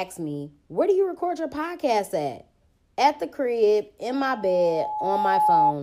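From 4.10 s to 5.74 s a steady tone near 849 Hz swells over roughly a second and a half until it sits a few decibels above the speech. This is loudspeaker feedback squeal: the microphone re-amplifies its own loudspeaker, and at that frequency the loop gain passed one.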